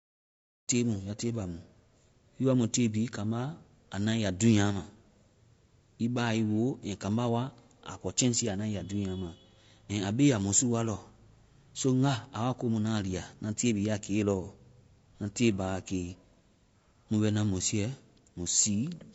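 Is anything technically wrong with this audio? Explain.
Yes. Throughout the speech there is plainly audible codec damage: voices sound rough and grainy, with noise filling the gaps between harmonics and a thin, synthetic-sounding top band, likely from low-delay AAC compression (AAC-ELD) at a low rate, consistent with about 32 kbps. Its short frames resolve pitch harmonics poorly, which sets it apart from ordinary AAC's swirly pre-echo. The smooth fade-in ending at 0.71 s is a deliberate edit.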